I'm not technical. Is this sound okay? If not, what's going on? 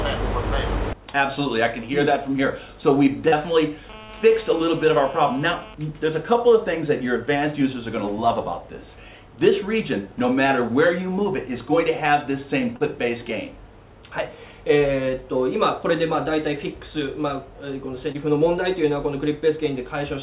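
No. At 3.28, 4.04, 12.76 and 18.12 seconds there is short concealed packet loss. About 40 milliseconds of audio (20 at 18.12) never arrived, and the receiver patched the gap by stretching the preceding sound. You hear a brief smear or wobble rather than silence, which sets it apart from a plain dropout.

From 3.9 to 5.7 seconds there is GSM phone buzz, caused by a nearby mobile phone on a call interfering with the audio circuit. It is a harsh, raspy buzz at about 217 Hz that holds steady throughout. That rough, edgy quality distinguishes it from the smoother, deeper hum of mains power.

The call line itself carries nothing above 4 kHz, giving the familiar narrow telephone sound.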